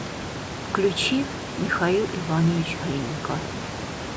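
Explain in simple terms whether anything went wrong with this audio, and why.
Nothing went wrong with this audio: what you hear is just the normal effect of a call microphone plus some quiet background noise from the room, and neither is a fault.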